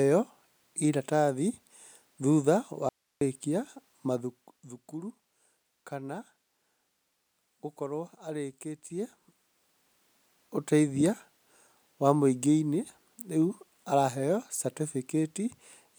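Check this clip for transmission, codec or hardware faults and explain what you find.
One fault stands out: an audio dropout to a faint residue from 2.89 s to 3.21 s. For about 0.32 s the speech cuts out abruptly and only low hiss remains, roughly 50 dB below the speech level. The likely cause is a momentary loss of the incoming signal while the path after the break stayed live. On a waveform the trace collapses to a thin band with square edges. A spectrogram shows a sharp vertical gap filled only by faint broadband noise.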